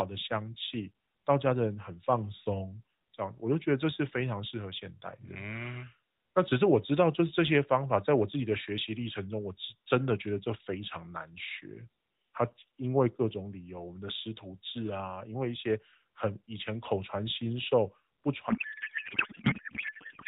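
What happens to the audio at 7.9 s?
Nothing goes wrong at 7.9 s: the speech continues intact through that moment, carried by the same AMR narrowband mobile codec as the rest of the clip.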